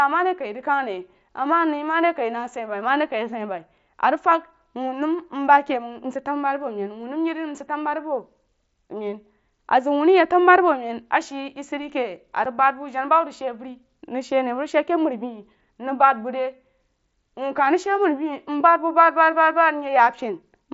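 At 12.45 s the speech has a brief, hard-edged hole, about 7.5 ms long: unconcealed Bluetooth headset packet loss. The gap fits a single lost mSBC packet, filled with silence or an idle pattern rather than smoothed over, against the light graininess of that wideband codec.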